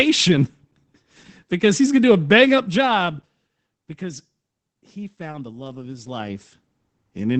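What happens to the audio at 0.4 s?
Opus voice compression is present at 0.4 s and throughout: coarse SILK coding, consistent with roughly 12 kbps, leaves the speech plainly muffled and hoarse, with nothing above 8.8 kHz.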